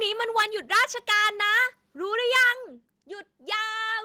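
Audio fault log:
0.38–0.45 s, 0.72–1.29 s and 2.35–2.50 s: microphone overload. Loud syllables turn harsh and crackly as peaks push about 6–7 dB past the converter limit and get flattened, likely from input volume set too high.
0.42 s and 2.43 s: microphone volume stepped down. Speech and background drop abruptly, by about 2 dB then about 5 dB, each time mid-distortion, likely the call software cutting input gain after clipping.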